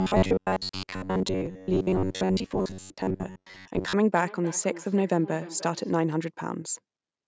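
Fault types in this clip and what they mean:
Robotic sound from repeated short buffers: From 0.01 to 3.93 s the speech turns into a rigid metallic buzz at 94.1 Hz. That's likely the player repeating roughly 10.6 ms chunks because fresh audio was arriving too slowly, so most of the real signal got skipped.
Feedback echo between two devices: Between 4.14 and 5.95 s, each phrase comes back around 300 ms later, thin and ringy, at most about 17 dB under the speech. A second device's speaker is feeding another device's mic, and neither echo canceller catches it.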